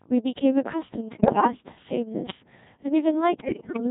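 Speech passes throughout a Codec 2 vocoder at 1.6 kbit/s, with heavy codec damage. Only pitch, voicing, energy and a coarse spectral envelope survive, and the decoder rebuilds the sound from sine waves. The result is robotic and buzzy. On a spectrogram the harmonics appear as neat, evenly spaced lines under a smeared, blocky envelope, with little fine detail between them. The waveform looks synthetic and does not match natural speech cycle for cycle. Bit errors on digital voice radio break in from 1.12 to 1.47 s and again from 3.40 to 3.80 s, at a rough error rate of one bit in seven for the first burst and one in five for the second. Each corrupted bit scrambles a frame's pitch, level, voicing or envelope, so the voice jumps and dissolves into bleeps, warbles and gibberish. A spectrogram shows harmonic stacks leaping up and down and energy flickering between frames. The waveform's amplitude lurches in short steps. 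At 2.30 s, invalid numbers at full scale produce a single sharp bang. A calculation yielded infinite or invalid values that were pinned to maximum amplitude. The block is only about 0.73 ms long, which fits a 32-sample block, so the start and end pops merge into one. The waveform shows a brief flat slab at one extreme, far beyond the speech peaks, and the spectrogram a thin vertical broadband line.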